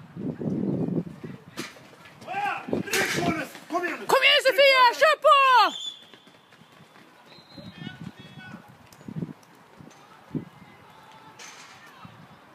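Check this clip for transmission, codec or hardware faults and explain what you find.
No audible faults found anywhere in the clip.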